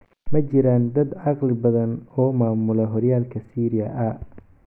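No technical faults are audible anywhere in the recording.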